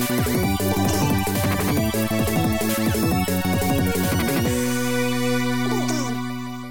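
From start to finish the audio plays at twice its proper speed and sits a full octave, 12 semitones, too high. This is a wrong sample rate fault: the samples are clocked out about twice as fast as they were captured, which fits material recorded near 22 kHz being played at 44.1 kHz with no conversion. Unlike a pitch shift, which leaves timing alone, or a time-stretch, which leaves pitch alone, tempo and pitch here rise together by exactly the same factor of 2.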